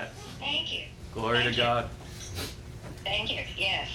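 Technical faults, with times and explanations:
0.0–1.0 s, channel delay (comb filtering): one channel arrives around 20 ms late before the mono sum, so shared content cancels at evenly spaced notches starting near 20 Hz. At a delay this long, the sound comes across as rough or slightly doubled.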